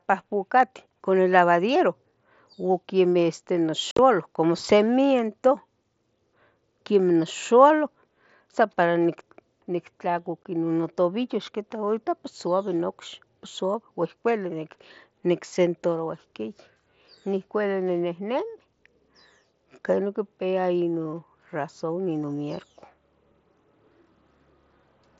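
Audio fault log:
3.91–3.99 s and 10.44 s: unconcealed Bluetooth headset packet loss. Headset packets dropped and nothing filled them. The speech has abrupt holes, about 68 ms in the first stretch and 15 ms in the second.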